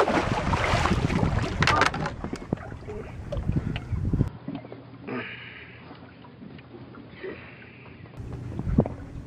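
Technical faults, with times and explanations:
4.28 to 8.17 s, input switched to a poorer device: the recording path likely moved to a different, lower-grade input, so the band is cut off with nothing above 5 kHz, the level falls by roughly 5 dB, and a new background noise sits well below the signal, around 55 dB down. The change happens with no gap, so the sound turns duller and quieter in an instant, then regains its full top end when the original input returns at 8.17 s.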